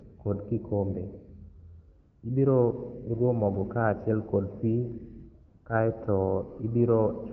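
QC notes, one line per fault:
1.99–2.23 s and 5.47–5.65 s, AMR comfort noise: the phone sent no speech frames for 240 and 180 ms, so the real background drops out for a smooth synthetic hiss.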